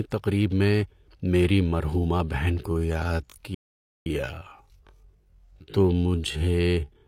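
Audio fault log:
2.59–7.07 s time-stretched section: speech abruptly slows to about 0.57 times its pace with unchanged pitch, likely stretched to fit a length by repeating short pieces, unlike a pitch-dropping slowdown.
3.55–4.06 s playback stall: output goes silent for about 512 ms mid-flow, likely the player running out of data.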